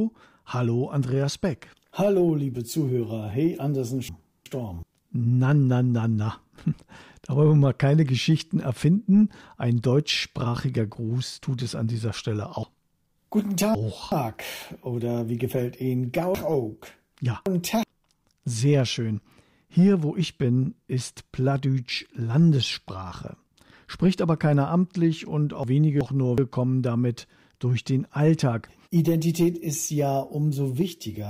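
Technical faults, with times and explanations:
4.09–4.83 s, 12.63–14.12 s, 16.35–17.83 s and 25.64–26.38 s: chunks out of order. A 0.37 s block plays late, by one block in the first and last spans and by three in the middle two. Nothing is lost. Each span has three hard joins, which jumble the sound.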